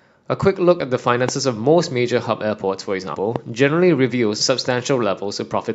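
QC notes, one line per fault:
0.79 s, 3.14 s and 4.39 s, compressed frames skipped: the sound jumps ahead by roughly 50 ms, then twice by roughly 100 ms, matching two and four missing frames of about 23 ms each. Overlapping neighbour frames smear each join into a brief blip, with no hard click. On a spectrogram, formant tracks shift abruptly at a soft vertical seam.
1.29–1.31 s and 3.36–3.38 s, loud pop: each is a single sharp pop about 15 dB above the surrounding sound, which carries on underneath. The likely cause is a voltage pulse from a plug, switch, static or driver glitch. The waveform shows a lone tall spike, and the spectrogram shows a thin full-band vertical line.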